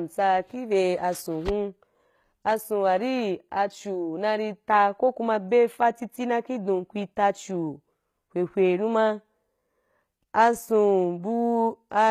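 From start to finish the speech carries plainly audible HE-AAC compression damage, so this is likely a low-rate HE-AAC encode, and the sound fits something around 20 kbps. The treble isn't the real thing. It's rebuilt by copying lower bands upward and shaping them roughly, so the upper harmonics don't line up with the ones below. That's why the s sounds come across gritty and metallic. There's also nothing at all above 14.9 kHz.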